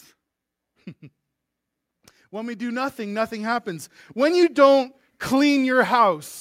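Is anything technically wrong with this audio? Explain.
Yes. From 2.31 s to 4.52 s there is automatic gain rising. The automatic gain control judged the incoming level too low and stepped its gain up gradually, by about 9 dB over a little more than two seconds. Because the gain acts on the whole signal, the speech and the background noise swell together, so the background climbs along with the voice rather than the voice alone getting louder.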